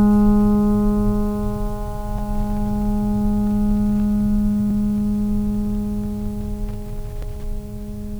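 Right at about 2.19 s in this music, then again near 4.71 s and 7.23 s, there's a small hiccup: overlapping chunks. The audio was handled in pieces of roughly 2.5 s, and each new piece kicks off 20 ms before the previous one finished, so that sliver plays twice at every join. You hear it as a quick stutter or tick, landing at that steady 2.5-second-ish spacing.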